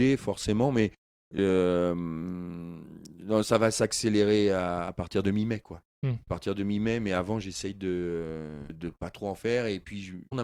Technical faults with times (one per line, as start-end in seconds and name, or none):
1.37 damaged data in a compressed stream
8.69 damaged data in a compressed stream
10.31 damaged data in a compressed stream